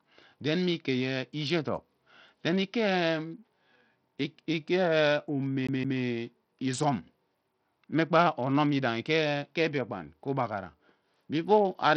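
A speech clip carries heavy codec damage from start to finish. The top bands flicker and drop out. A gritty noise with aliasing rides on the voice, and nothing remains above about 20.9 kHz. This is likely Bluetooth SBC compression, starved of bits at what sounds like a rate near 64 kbps. From 5.67 to 6.00 s the sound sticks like a CD stuck on one turn. A 0.17 s slice plays twice, with a short mute at each jump back, giving a fast, even stutter.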